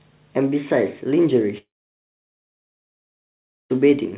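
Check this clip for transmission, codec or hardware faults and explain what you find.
One transmission fault stands out in this speech clip, heard through a band that stops at 4 kHz, which fits a narrowband G.711 call path.

From 1.58 to 3.72 s, the sound holds as a brief fading buzz, then goes silent for about 2 s before resuming with that stretch missing. This is likely a long network dropout, with the receiver filling the gap.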